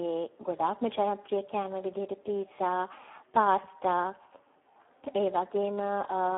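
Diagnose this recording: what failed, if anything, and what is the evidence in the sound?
The codec stage failed, with heavy Speex codec damage throughout this speech. Too few bits for the CELP excitation, which fits a bitrate near 8 kbps, leave it hoarse and noisy. A spectrogram shows a 300 Hz to 3.4 kHz telephone band, blank above 3.7 kHz.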